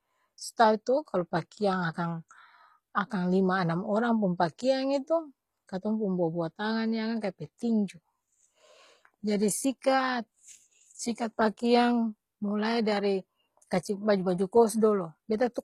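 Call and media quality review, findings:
Treble on speech plainly smeared throughout. S sounds gritty, lispy, metallic. Likely HE-AAC compression: upper band rebuilt by spectral band replication, copied from lower bands, so harmonics misalign above crossover. Damage level fits a low bitrate around 20 kbps.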